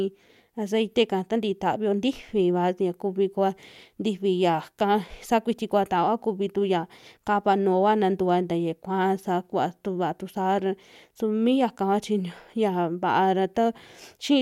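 No technical faults occur anywhere in the speech recording. Nothing in the signal chain draws attention to itself at any point along the way.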